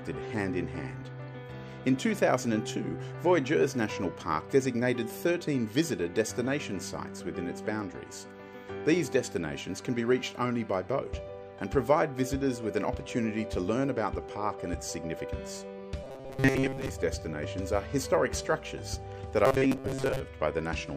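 Audio is likely arriving too slowly for playback, so the software keeps looping a stretch of about 7.5 ms in place of the sound it has lost. That is robotic sound from repeated short buffers, from 16.04 to 16.93 s and again from 19.45 to 20.20 s. In both stretches most of the audio is repetition, which stamps a fixed 134 Hz buzz over it. The sound turns hard and metallic and only loosely tracks its original contour.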